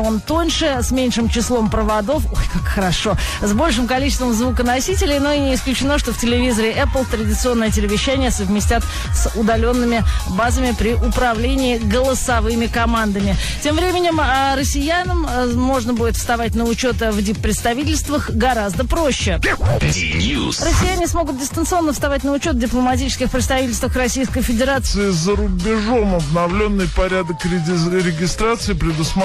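An audio clip whose final stretch, from 24.86 s to the end at 29.24 s, is a section at the wrong speed: it plays at 0.769 times its proper rate, so everything drops by about five semitones and drags noticeably. The likely cause is that this part was fitted to the wrong clock during editing or playback. Because speed and pitch fall together, abruptly, it differs from a pitch-shift or time-stretch, which would alter only one of them.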